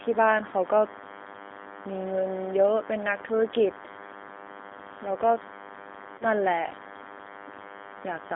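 DECT cordless phone buzz runs through the whole clip. A nearby DECT handset or base transmits a radio burst every 10 ms, and the audio circuitry rectifies it. The result is a thin, steady 100 Hz buzz rich in harmonics, sitting roughly 15 dB below the speech.

G.729 codec damage is plainly audible from start to finish. The speech is squeezed into a 250 Hz to 3.4 kHz telephone band and rebuilt from a vocal tract filter, a pitch predictor and sparse pulses, which fits G.729A at 8 kbit/s. Voices come out rough and slightly synthetic.

VoIP packet loss concealed by the speech codec occurs from 6.18 to 6.25 s. About 30 ms of audio went missing, consistent with three lost 10 ms frames. The decoder extended its last pitch and filter settings with falling gain, so the sound smears into a buzzy tone or coloured noise that fades.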